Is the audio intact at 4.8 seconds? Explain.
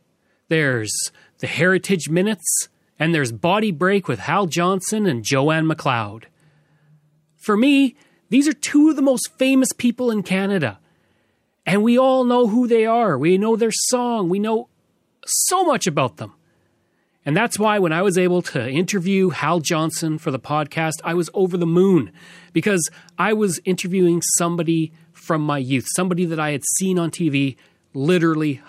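No: sample clock jitter from 4.58 to 6.52 s. Jitter of well under a microsecond mistimes samples, adding faint hiss tracking loud, bright speech, seen as a noise haze around strong high-frequency bands on a spectrogram.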